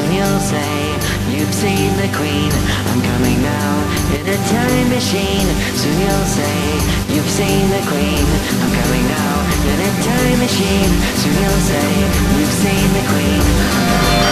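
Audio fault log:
4.16–4.27 s and 7.03–7.09 s, one channel drops out: the level dips abruptly by about 6 dB twice, for roughly 0.11 s and then 0.05 s, and recovers just as suddenly. The likely cause is one side of the stereo signal briefly going silent. In the mono sum, material shared by both channels loses half its contribution, hence the 6 dB step, and anything carried only on the missing side vanishes for those moments.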